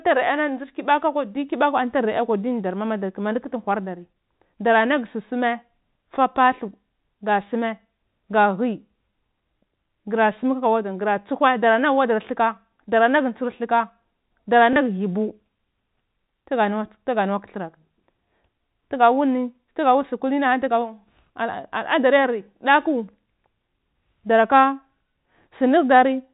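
A small blip breaks into the speech at 14.73 s, lasting about 30 ms to 14.76 s. The cause is packet loss with the last packet repeated: a single packet went missing, and the receiver filled the gap by replaying the previous one. The speech runs through G.711 telephone coding, which cuts everything above 4 kHz.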